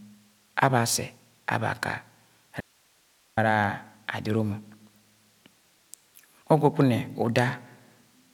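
At 2.61 s the speech cuts out abruptly until 3.37 s, an audio dropout to a faint residue lasting about 0.77 s. Only hiss roughly 40 dB down remains, likely a lost signal feed with the downstream path still live. The waveform collapses to a thin noise band, and the spectrogram shows a sharp-edged gap of faint broadband hiss.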